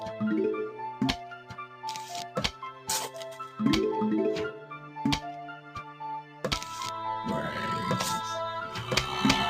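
A noise suppressor built for speech has been left running on audio that isn't speech. It treats steady tones, ambience and tails as noise and keeps pulling them down. Sudden attacks slip through, but sustained parts sink. The level of held material swings by around 10 dB, so the sound pumps and thins as the suppressor opens and closes. Several passages are cut noticeably harder than their surroundings. These are sounds the suppressor has mistaken for noise. The dips fall at 1.23 to 1.84 s, 2.52 to 2.89 s, 4.54 to 4.98 s, 5.51 to 6.01 s and 6.21 to 6.44 s. They go down by about 8 to 9 dB. Each lasts a fraction of a second. In these spots the steady or fading content drops away and its decay is cut short.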